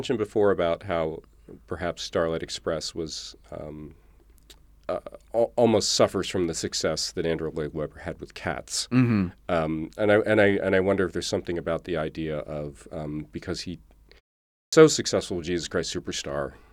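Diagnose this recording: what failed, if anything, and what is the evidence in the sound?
The failure is a clipped start after a pause at the playback stage, where the output device powers down during silence. After a gap of about 0.36 s, the sound resumes abruptly at 14.48 s, just before "successful with", and the opening 245 ms, up to 14.73 s, is missing. The onset cuts in mid-sound with no natural attack, consistent with the device needing roughly a quarter second to wake and relock before it passes audio again.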